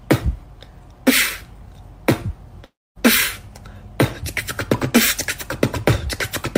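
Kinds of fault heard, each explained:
Long network dropout: At 2.65 s the sound turns into a smeared buzz that quickly fades, then near-silence for about 0.24 s, before the audio resumes abruptly at 2.98 s with roughly 0.3 s simply missing rather than delayed. The likely cause is a stretch of packets that never arrived. The receiver's concealment repeated and decayed the last audio it had, gave up into silence, and then picked up again from the next packets, skipping the lost part.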